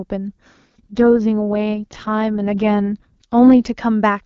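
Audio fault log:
0.65–3.69 s, AMR rate drop. The speech turns rough, raspy and synthetic, then clears again at 3.69 s. The band does not narrow and there is no gap. The sound points to the AMR-WB codec being told to fall from its clean top mode, near 23.85 kbit/s, to its lowest mode, near 6.6 kbit/s. On a weak radio link, fewer bits go to modelling the voice and more go to error protection. So the vocal detail turns coarse.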